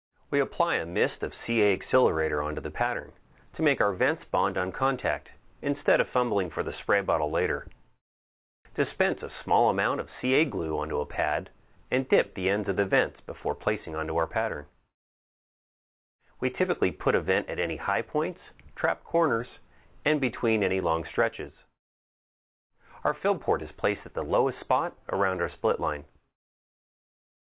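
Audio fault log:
No faults heard anywhere in the clip.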